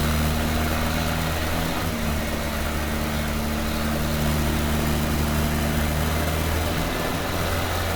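Generation loss runs throughout: swirly, smeared, hollow, with blurred attacks. The likely cause is repeated Opus re-encoding, about three passes, consistent with 64 kbit/s.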